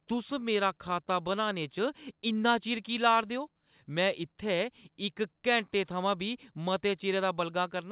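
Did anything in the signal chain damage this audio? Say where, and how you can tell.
No, nothing in the chain stood out on listening; the speech simply carries the narrow telephone band of the call path, with nothing above 4 kHz, as that link normally gives.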